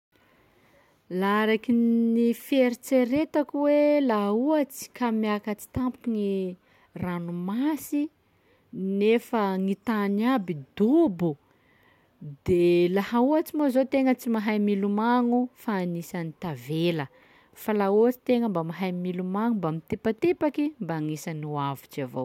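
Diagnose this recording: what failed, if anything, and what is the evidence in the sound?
Nothing failed here; the speech comes through intact, with no fault in the chain that the sound gives any reason to chase.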